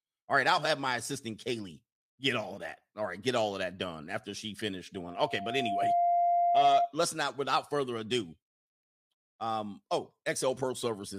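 A microphone picking up its own loudspeaker causes loudspeaker feedback squeal from 4.94 to 6.91 s, after "done after she finished": a 694 Hz tone swells over about a second to roughly 5 dB above the speech.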